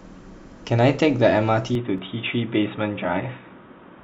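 At 1.75 s the speech abruptly loses its top end and stays that way to the end: nothing remains above 3.8 kHz, and a new background noise floor appears, roughly 35 dB below the speech. The likely cause is an input switched to a poorer device, such as a second microphone or a headset's call profile. Unlike an equaliser or low-pass filter change, the narrowing arrives together with a different noise bed, while the loudness stays about the same and there is no gap at the changeover.

At 1.98 s, just after that switch, a tiny skip occurs. This is an overlap between stream segments: two pieces of the stream, which fit a segment length of 2.0 s, carried time stamps that overlapped, so the player discarded the overlapping stretch even though that sound was not actually duplicated. About 16 milliseconds go missing and the waveform jumps. This skip happens only once. A dropout would leave a silent gap instead, and this skip has no repeated pattern the way a stutter does.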